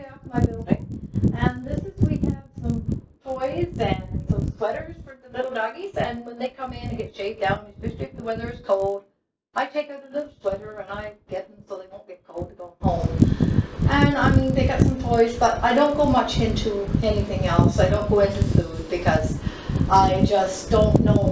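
Throughout, a steady 50 Hz buzz rides under the sound and disappears whenever the signal drops away. This is a resampler restarted on every block: each 20 ms chunk was converted in isolation, so every block edge carries a small error, which fits a 44.1 kHz to 16 kHz conversion.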